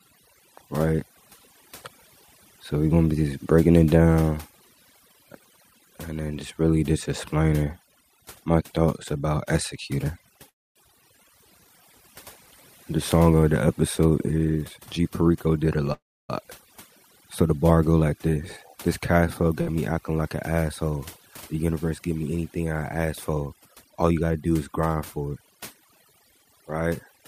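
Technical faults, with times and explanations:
Throughout: overdone noise removal. The noise reducer was pushed too hard, so bands near its noise estimate get pulled right down along with the quieter parts of the speech. You're left with a near-silent background full of little twinkling specks.
10.49 to 10.78 s and 15.93 to 16.31 s: call audio freeze. Speech stalls for about 0.28 s and then 0.38 s. The held sound decays to roughly a quarter-second of silence each time, and then the speech picks up where it left off with nothing lost. That's likely packets held up in transit draining the jitter buffer, which adds delay rather than dropping audio.
14.01 to 15.79 s, 18.29 to 19.15 s and 23.57 to 24.32 s: jitter buffer speed-up. Right after "song of the" the speech runs about 14% fast, after "the bar go like" about 9%, and just before "do is grind for" about 10%, all at the same pitch. The buffer is trimming repeated pitch-period slivers to shed backed-up delay, about a third of a second in the first stretch and less in the others. 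It comes across as hurried.
19.61 to 19.68 s: burst of packet loss. Roughly 60 ms of speech is gone. For about 50 ms the receiver stretches the last sound into a fading buzz or hiss, then jumps ahead, so there's a short smeared patch where a bit of speech simply disappears.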